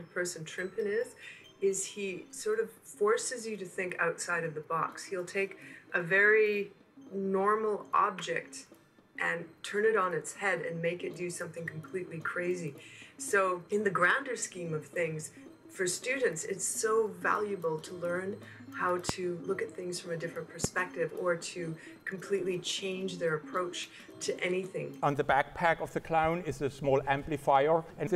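At 19.09 s and again at 20.64 s a loud pop cuts in, each lasting about 20 ms and peaking roughly 20 dB and then 15 dB above the surrounding sound, which continues underneath. Each is a single sharp thump, likely from a voltage step such as a switch or static discharge. On a waveform each shows as a tall isolated spike. On a spectrogram each appears as a thin vertical stripe spanning all frequencies.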